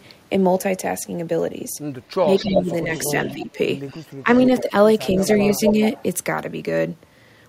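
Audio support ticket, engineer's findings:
Talker dips in level by around 10 dB in pieces, about half a second in total, 2.22–3.56 s; shorter dips, about a fifth of a second, 4.22–5.17 s. Speech suppressed in double talk, likely from the echo canceller. With both sides talking at once, it failed to separate local speech from loudspeaker echo and attenuated both.

Faint delayed copy of the voice, 264 ms behind and around 15 dB down, 2.36–4.63 s. Echo leak, likely at the far end's loudspeaker path: its canceller left residual pickup, which was sent back. Stronger repeat at 5.26–6.03 s, 268 ms delay, only around 5 dB under the speech. Same leak, with less of the echo removed.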